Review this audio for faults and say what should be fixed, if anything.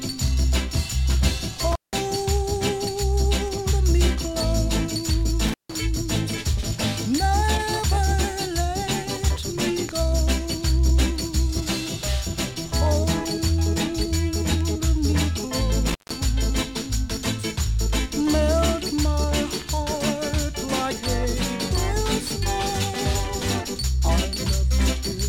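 A loose cable or plug in the signal path is making intermittent contact, briefly breaking the connection three times: at 1.72 to 1.94 s, 5.47 to 5.75 s, and 15.87 to 16.17 s. Each time the line stays open for about 174, 157 and 162 ms. While it is open the sound drops out to faint hiss, with crackle as the contact breaks and remakes. Reseat or replace the cable and connectors, and secure them with strain relief.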